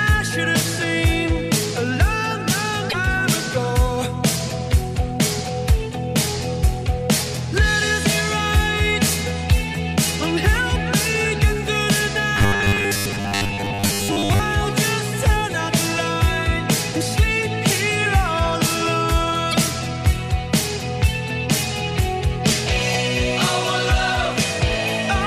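Damaged data in a compressed stream first appears from 2.86 to 2.94 s, then again at 6.62 s and 9.51 s. In each spot part of the encoded stream is wrong, so the decoder misreads or rejects those frames, loses sync and hunts for the next valid frame header. Each one comes through as a brief disruption: a chirp, squawk, click or short hole in the audio.

Robotic sound from repeated short buffers runs from 12.37 to 14.40 s. It is likely caused by audio arriving too seldom, so the playback side fills the gaps by looping a short stretch of the last audio it received. The buzz sits at 100 Hz, which fits a repeated piece about 10 ms long. Most of this stretch is repeated material rather than new audio, and the result is a rigid, metallic buzz that follows the original sound only loosely.

Damaged data in a compressed stream returns from 19.51 to 19.55 s. Again the decoder hits corrupted frames and has to resynchronise.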